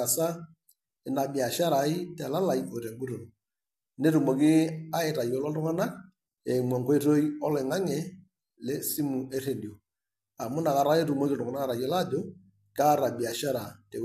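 Throughout, the speech sounds rough and grainy, with noise between harmonics. Likely low-delay AAC compression: short frames resolve pitch poorly, consistent with about 32 kbps.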